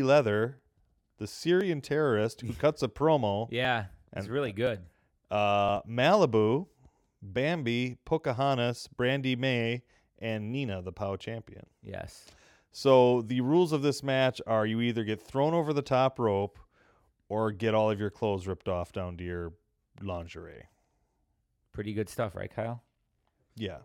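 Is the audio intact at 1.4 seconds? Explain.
No. 1.4 s lies inside a stretch of periodic USB or driver dropouts from 0.59 to 5.69 s. Roughly every 1.02 s something blocks the audio path and a few milliseconds of speech are skipped, giving a regular tick. That exact spacing, heard only while there is signal, separates it from random clicks or irregular buffer underruns.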